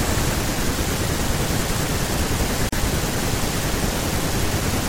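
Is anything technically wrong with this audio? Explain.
Yes. There is a gap at a join of encoded pieces at 2.69 to 2.72 s. The speech was encoded as separate segments that were joined without trimming, so the encoder's start-up delay and the padding of the final frame were left in at the seam. The result is a gap of about 35 ms that cuts through continuous speech. Its edges are smeared by the codec, so the truly silent part is shorter, and the speech then carries on from where it stopped.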